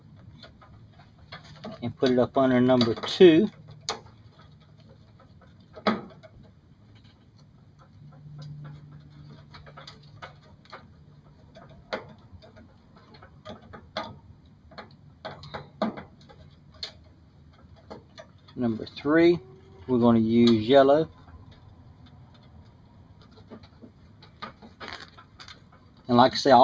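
Noise suppressor applied to music or sounds, throughout the clip: a suppression stage tuned for speech treats sustained tones, ambience and decay tails as noise, pulling them down by roughly 10 dB while attacks pass, so the sound pumps and thins. The call's microphone processing limits content to below 8 kHz.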